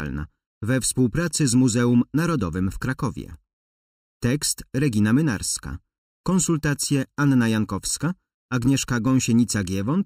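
One channel runs under a millisecond late and the two are summed, a channel delay causing comb filtering throughout, with notches from around 700 Hz giving a hollow, phasey sound.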